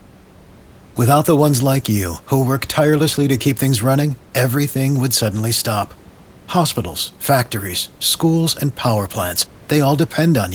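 Nothing in this speech recording sounds technically faulty.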